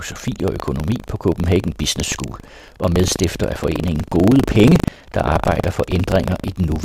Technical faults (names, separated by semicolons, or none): buffer tearing